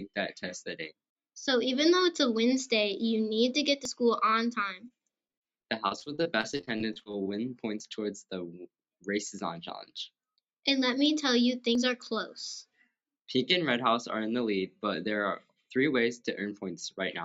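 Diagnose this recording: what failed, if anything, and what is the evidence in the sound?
Audio missing between chunks, at the buffer or driver stage, shows up as abrupt skips at 3.85, 7.80, 11.75 and 15.70 s, spaced about 4 s apart. Each removes a short slice, around 50 ms, and butts the two sides together without silence. The likely cause is a recorder writing 4-second blocks and dropping audio at each handover. On a waveform each skip appears as a sudden discontinuity, and on a spectrogram as a thin vertical seam.

Repeated packet loss (robotic sound) at the network stage runs from 4.88 to 7.27 s. A rapid series of holes, the longest 39 ms, was each filled by the jitter buffer stretching the last sound forward. Those patches cover about 20% of the stretch, roughly 472 ms in total, giving a choppy texture with pieces missing. A spectrogram shows smeared, repeated frames with flattened harmonics inside an 8 kHz call band, and the waveform shows periodic cycles repeated where the signal should change.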